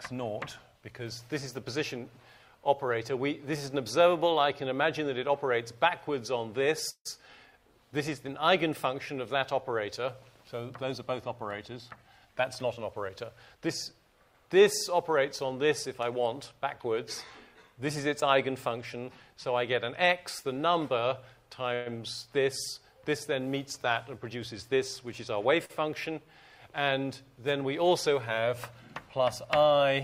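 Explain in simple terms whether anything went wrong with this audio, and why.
Yes, a few things went wrong while this audio travelled over the network.

Call audio freeze, at 6.89 to 7.07 s and 21.74 to 21.88 s: the likely cause is that a batch of packets was held up on the way, so the receiver's jitter buffer ran dry. The receiver kept the last bit of sound going until the packets arrived. The first freeze fills 158 ms, ending in about 70 ms of silence. The second fills 115 ms with a fading buzz or hiss. Afterwards the sound picks up exactly where it stopped, so nothing is lost; it is only delayed.

Jitter buffer speed-up, at 11.75 to 13.94 s and 24.36 to 25.36 s: audio piled up in the receiver's buffer, more than it wants to hold. To catch up, the receiver quietly cut out many tiny slices of sound. The first stretch plays at 105% speed and drops roughly a seventh of a second in total. 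The second runs at 104% and drops about a twentieth of a second. The pitch stays the same, but the first stretch feels slightly rushed.

Short stall from a late packet, at 25.65 to 25.71 s: one packet arrived later than it was due, so the receiver held the last sound for 43 ms until it came in. Nothing is missing, but that moment is stretched, with a faint buzz or dip.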